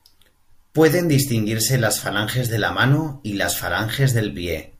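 Speech recording with no audible technical faults.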